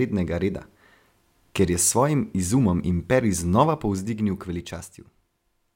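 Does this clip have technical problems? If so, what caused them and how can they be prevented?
Yes. After "izumom imperij", from 3.66 to 4.96 s, a ticking zipper noise rides on the speech as the level falls about 10 dB in unsmoothed 2 dB steps, around five per second. Ramping gain sample by sample prevents it.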